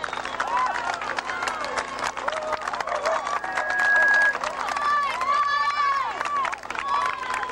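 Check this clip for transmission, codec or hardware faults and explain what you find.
One fault is present: loudspeaker feedback squeal from 3.25 to 4.37 s. A microphone re-captures its own loudspeaker, and around 1.6 kHz the loop gain exceeds one, so that tone feeds itself. It swells over most of a second to roughly 10 dB above the sound. Unlike a steady interfering whistle, it starts quietly and grows.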